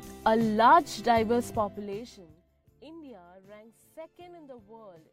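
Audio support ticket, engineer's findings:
Zipper noise, 1.46 to 2.44 s. Fast ticking or zipping riding on the sound during a fade of about 25 dB. Probable component: gain stage applying level changes without smoothing. Mechanism: level stepped in 1 dB increments at around 40 steps a second, each abrupt step leaving a small click.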